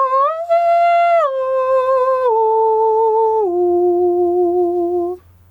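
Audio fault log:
throughout, gain pumping: the gain swings roughly 15 dB, so the music sounds squashed with little dynamic contrast; likely caused by excessive input gain driving a fast limiter or compressor on every peak.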